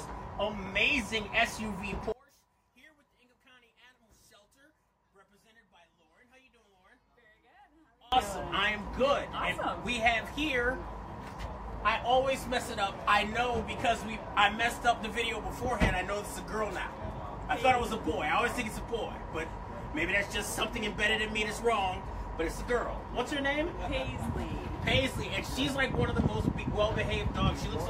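From 2.12 to 8.12 s the sound drops by about 29 dB to a faint copy, with the centre mostly gone. That's likely one channel inverted, so the shared content cancels when the two channels get summed to mono.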